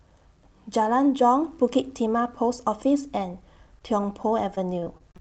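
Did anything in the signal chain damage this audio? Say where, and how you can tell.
Yes. At the network stage, repeated packet loss (robotic sound) runs from 4.23 s to the end at 5.20 s. Eight short holes, none longer than about 30 ms, are patched by extending the previous sound, covering about 15% of that span. The result is choppy, with pieces missing. On a waveform, cycles repeat with small breaks. On a spectrogram, harmonics smear flat, with gaps, below the call path's 8 kHz ceiling.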